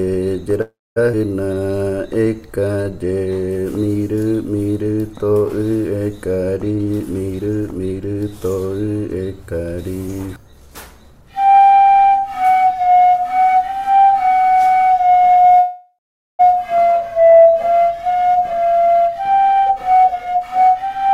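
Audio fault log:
0.61–0.98 s, call audio freeze: the last sound carries on as a fading buzz, then about 0.23 s of silence. Playback resumes where it stopped, likely because delayed packets emptied the jitter buffer.
1.12–1.15 s, skip ahead: playback jumps forward with almost no gap. Roughly a fifth of a second of audio is lost, and the two sides join directly.
1.47–2.92 s, jitter buffer slow-down: repeated pitch periods stretch this stretch to 85% speed, adding 225 ms. Sounds are drawn out, but pitch stays unchanged.
6.71–8.15 s, jitter buffer speed-up: short pitch-period pieces are cut out, so the audio runs at 125% speed. Around 0.4 s is removed, and it sounds hurried.
15.59–16.41 s, call audio freeze: a fading buzz fills 0.8 s, ending in about 0.43 s of silence. Playback then continues from where it stopped, with nothing missing.
18.10 s to end, jitter buffer speed-up: trimmed pitch periods push playback to 123% speed. 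Roughly 0.7 s is removed, and the ending feels rushed at the same pitch.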